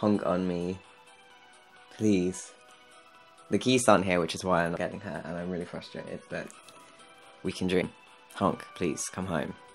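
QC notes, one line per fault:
4.76 s and 7.81 s, compressed frames skipped: at each point roughly three frames of compressed audio are never played, so about 70 ms of the sound is simply missing and playback jumps ahead, which fits a frame length of about 26 ms. Unlike a dropout there is no gap of silence, and unlike a buffer glitch there is no hard click. Overlapping neighbour frames blend across the jump, leaving only a short smeared blip.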